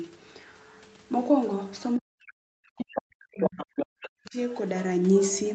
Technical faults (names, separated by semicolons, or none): speech suppressed in double talk; other side's voice leaking through